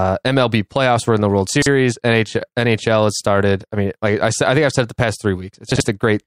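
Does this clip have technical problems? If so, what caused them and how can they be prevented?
Yes. Chunks out of order occur at 1.49 to 1.66 s and 5.72 to 5.80 s, just after "said it the past". Chunks of about 43 ms each are played late, three chunks late in the first place and one in the second. This causes a brief jumbled stretch with hard joins. To prevent this, buffers should be sequence-numbered and reordered before playback or writing, so a late chunk is put back in its correct position.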